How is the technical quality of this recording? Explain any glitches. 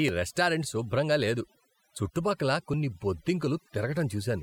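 The recording suffers from one persistent problem: overdone noise removal, present from start to finish. A noise reducer set far too aggressively has been pulling individual frequency bands down or out entirely whenever they sit close to its idea of the background noise. Softer parts of the speech fall below that threshold and get stripped along with the noise, while the pauses sink into near silence dotted with small twinkling specks.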